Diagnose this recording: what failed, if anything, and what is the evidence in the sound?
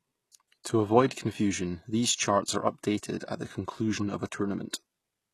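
The failure sits at the codec stage, and the likely culprit is HE-AAC compression. The damage is plainly audible for the whole clip. The treble sounds present but synthetic. The s sounds come out gritty and lispy. Nothing is heard above about 12.3 kHz. The upper band is not coded directly. It is rebuilt by copying lower bands upward under a coarse envelope, so harmonics fail to line up. That fits a bitrate around 16 kbps.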